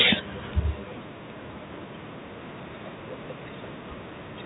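No technical faults are audible.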